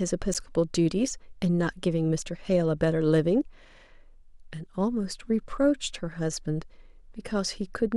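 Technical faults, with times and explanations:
0.34 s, block of digital silence: a roughly 12 ms dropout to zero with hard edges, heard as a tick in the speech, which fits a 512-sample buffer not filled in time.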